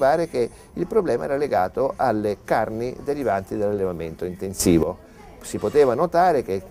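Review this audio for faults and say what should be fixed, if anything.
At 4.60 s the whole signal, background noise included, steps up abruptly by about 12 dB, holds at that raised level, and drops back at 4.83 s. The change arrives between one sample and the next rather than over any audible fade. This is a sudden gain jump, likely caused by a digital gain setting or bit shift applied instantly without a ramp, so everything in the path is scaled at once.

To prevent it, apply gain changes through a short smoothing ramp instead of switching the multiplier in a single step.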